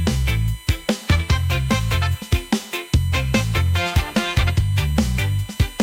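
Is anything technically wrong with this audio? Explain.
Yes. USB whine runs throughout: a steady 1 kHz tone with its strongest harmonic at 3 kHz, roughly 25 dB below the signal, from 1 ms bus frames leaking through power or ground.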